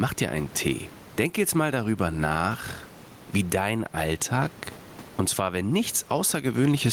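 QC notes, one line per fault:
Throughout: gain pumping. The room background sits about 31 dB below the speech, and the gain swings about 15 dB, squashing dynamics. Likely a fast limiter fighting far-too-high input gain. The waveform looks flattened.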